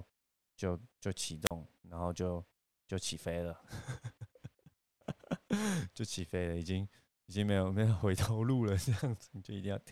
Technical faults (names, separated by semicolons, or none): wireless microphone squelch dropout